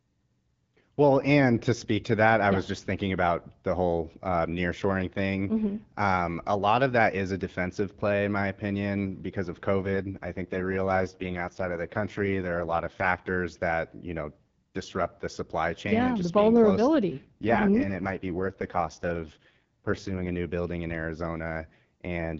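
Speech carried over an AMR-WB call has two AMR rate drops. The first runs 9.8 to 13.4 s, just after "my opinion because of", and the second runs 17.1 to 20.3 s, ending before "a new building in". In each, the voice turns rougher and more synthetic, consistent with the codec rate falling from 12.65 to 6.6 kbit/s. A spectrogram keeps the same bandwidth with no gap, but the harmonics blur into grainier texture. The waveform stays continuous.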